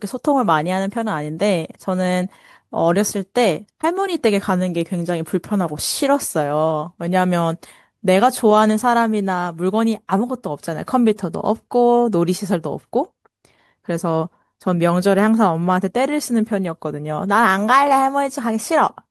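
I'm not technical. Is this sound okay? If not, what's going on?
Yes, no faults heard here.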